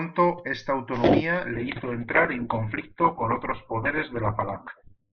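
At 1.53 s the speech drops abruptly to an adaptive stream at a lower bitrate, with no gap. The connection slowed, so a cheaper encoding was served. Nothing sounds above 4.4 kHz. Sibilants turn dull, which fits a fall from 64 to 8 kbit/s Opus.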